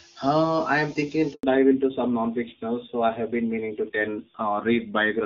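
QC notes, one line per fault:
1.33 to 1.43 s, handover gap: after "I am thinking" the speech dies away and stays silent for 100 ms. No speech frames arrived while the call switched networks.
1.43 s to end, fallback to narrowband: everything above 4 kHz vanishes, so speech turns duller and rougher. This points to a drop from HD Voice to low-rate narrowband AMR.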